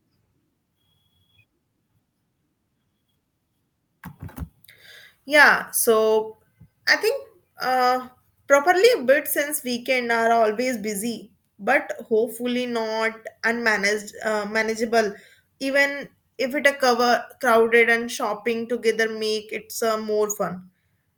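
No technical faults can be heard anywhere in the recording.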